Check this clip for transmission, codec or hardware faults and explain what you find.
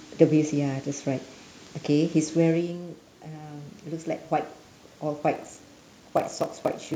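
Two faults are audible in the speech: an automatic gain rise in the middle and a block size mismatch near the end.

From 2.61 to 4.32 s there is automatic gain rising. Just before it, around 2.5 s, the talker moves away and the voice falls by about 11 dB. The gain control responds by slowly adding about 4 dB over roughly 1.7 s, so the voice and the room noise swell up together. On a waveform the envelope climbs steadily across that stretch. On a spectrogram the noise floor brightens along with the speech, which is what separates this from a talker simply coming closer.

From 5.33 s to the end there is a block size mismatch (padded). One stage writes 1024-sample blocks and the next reads larger ones, about 1152 samples, and fills the shortfall with silence. Each block therefore carries a short gap of a few milliseconds. The gaps repeat at 41.7 Hz, which fits 1152-sample blocks at 48 kHz, and they produce a low buzz. 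Because of the added silence the speech plays at 0.889 times normal speed but keeps its timbre. A waveform shows regularly spaced dropouts. A spectrogram shows thin vertical gaps with a comb of buzz harmonics at multiples of 41.7 Hz.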